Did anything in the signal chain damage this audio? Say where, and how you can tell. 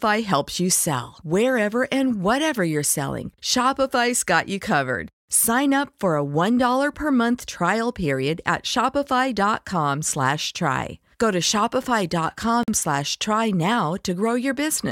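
Yes, there's a gap at a join of encoded pieces, a codec-stage problem. At 12.63 s the speech drops into about 47 ms of silence with smeared edges, then resumes right where it stopped. Two separately encoded pieces were butted together, leaving encoder delay and end padding in.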